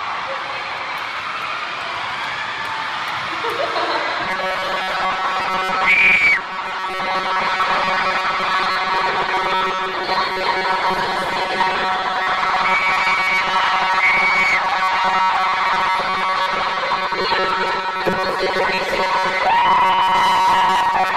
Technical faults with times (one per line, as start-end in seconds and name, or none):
4.23-21.17 robotic sound from repeated short buffers